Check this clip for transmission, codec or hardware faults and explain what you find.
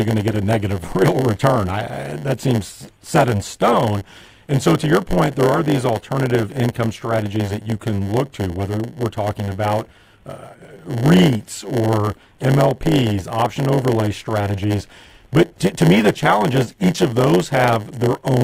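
One fault runs through the whole recording. A block size mismatch (padded) is present from start to finish: an upstream stage hands over blocks shorter than the next stage expects, and the shortfall in each block is filled with zeros. These silent slivers recur 100 times per second, producing a steady 100 Hz buzz over the speech. Because each block carries filler, the speech plays back at 0.919 times its proper speed, yet its timbre stays.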